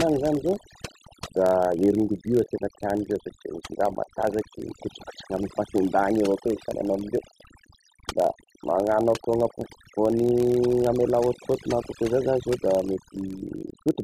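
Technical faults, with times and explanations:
Throughout: overdone noise removal. The noise reduction is working far too hard on this speech. Individual frequency bands are pulled down or switched off whenever they sit close to the tool's noise estimate, so the background drops and breaks up into twinkling, chirpy specks. The quieter components of the voice fall below that threshold too and are removed along with the noise.
Throughout: filter restarted on every block. A steady buzz at about 43.1 Hz runs under the speech, which fits a filter that loses its state and starts from silence every 1024 samples at a 44.1 kHz rate. Each restart leaves a small transient at the start of the block, and these transients repeat fast enough to fuse into a buzz rather than separate ticks. The buzz rises and falls with the level of the speech because each transient scales with the signal entering the filter.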